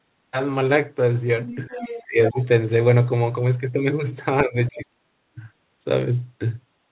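A speech recording in which the echo canceller on the talker's end likely failed to remove the loudspeaker signal, so the other side's voice leaks through as faint scraps from 1.47 to 1.56 s and 1.77 to 2.03 s, about 15 dB under the talker, and a little louder, about 10 dB under, from 2.24 to 2.45 s. The same canceller, likely unable to tell its own talker from that echo during double talk, turns both down, so the speech is suppressed in double talk: a shallow dip of a few decibels from 1.67 to 1.76 s, a much deeper drop of about 25 dB between 2.03 and 2.38 s, and a gap of about half a second between 4.42 and 5.04 s, sinking about 30 dB. The whole clip is narrowband, with nothing above 4 kHz, which fits a G.711 call path at 64 kbps.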